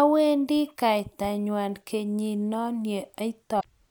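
Right near the end, from about 3.57 to 3.65 s, there's a burst of damaged data in the compressed stream. Some of the encoded bytes in that stretch were corrupted, so the decoder couldn't make proper sense of those frames and lost sync for a moment until it locked onto a valid frame header again. What you hear is a short glitch, roughly 80 ms long, cutting across the speech just before it finishes.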